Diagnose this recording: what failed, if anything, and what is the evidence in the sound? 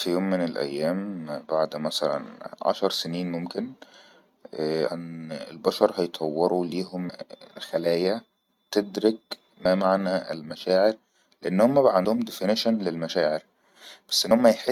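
Codec stage: compressed frames skipped. The speech jumps ahead at 4.87–4.89 s, 7.08 s, 9.64 s and 14.30 s. Roughly a tenth, three tenths, a tenth and a twentieth of a second vanish. Whole frames are lost.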